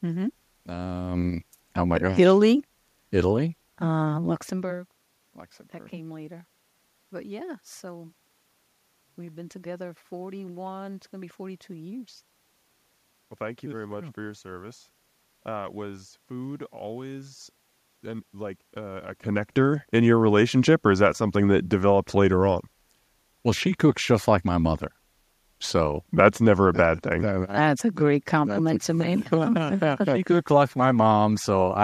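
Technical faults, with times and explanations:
No technical faults found.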